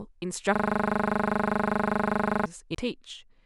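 System hang loop from 0.56 to 2.46 s in this speech clip: playback freezes on one 40 ms slice of audio that repeats about 48 times, producing a rattling buzz at 25 Hz. The driver likely stalled while the hardware kept cycling a 40 ms ring buffer. CD skip at 2.75 s: a tick and a muted gap of roughly 10 ms, after which the audio resumes from a different point, as the laser jumps to another turn of the disc's spiral after a knock or surface flaw.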